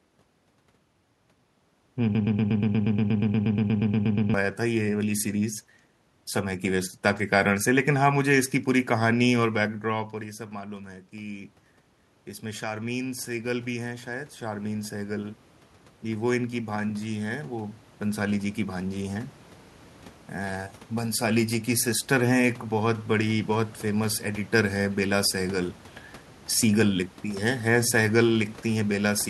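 From 2.15 to 4.34 s the audio stutters into a broken-record loop: a snippet about 119 ms long repeats back to back, eighteen times, producing a rapid mechanical chatter in place of the speech that should have continued. The likely cause is a stalled player, encoder or stream that kept re-sending the last fragment it held, so whatever should have played during those two seconds is gone.

From 9.91 to 21.27 s the level swells slowly, and the room noise rises right along with the speech, lifting by about 14 dB over those eleven seconds. This is automatic gain rising. Just before 10 s the talker moved away from the microphone, so the input fell by about 14 dB. The gain control read that drop as a quiet source and gradually raised its gain, restoring the loudness and pulling the background up with it.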